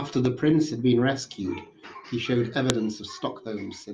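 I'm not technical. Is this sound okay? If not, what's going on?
No. There is one sharp, loud click at about 2.7 seconds into this speech. It is a fault called a file header played as audio. Digital sound files begin with a short block of labelling information. That block is not meant to be heard. Here, two pieces of audio seem to have been joined without removing that block. The player treated it as sound, so it comes out as a sudden snap.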